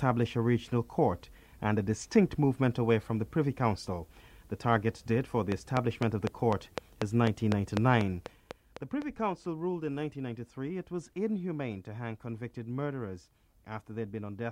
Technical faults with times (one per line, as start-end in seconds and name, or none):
5.52-9.03 train of clicks